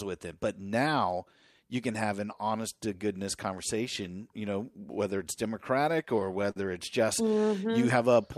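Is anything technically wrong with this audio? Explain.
Yes. From 5.92 to 6.57 s the speech drags and stutters, catching seven times as brief held-over sound fills the gaps, the longest about 49 ms. These are repeated stalls (stutter): the jitter buffer kept running dry, so the last sound was extended, about 107 ms in total, with nothing lost.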